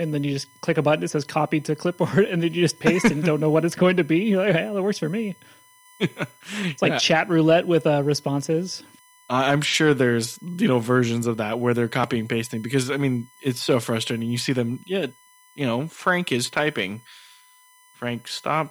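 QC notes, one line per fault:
Throughout: USB whine, a steady fixed-pitch tone at 1 kHz under the speech, roughly 30 dB below it. Current drawn in 1 ms USB frames leaks into the audio through power or ground. A spectrogram shows a thin unbroken horizontal line at 1 kHz.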